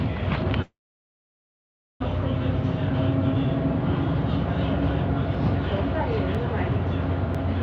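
From 0.62 to 2.02 s the sound stalls in a call audio freeze, likely from packets held up until the jitter buffer emptied. A brief fading continuation gives way to about 1.27 s of silence, a flat waveform and blank spectrogram, before the sound resumes intact, just 1.38 s late.

Between 5.35 and 7.35 s, periodic USB or driver dropouts skip about half a millisecond of sound once per second, heard as regular ticks. Each shows as a hairline vertical stripe across the spectrogram, which stops at 8 kHz on this G.722 call path, and a tiny discontinuity in the waveform.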